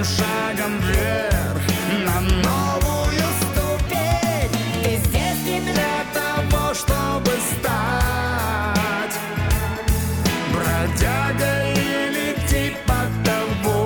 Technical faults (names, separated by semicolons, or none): section at the wrong speed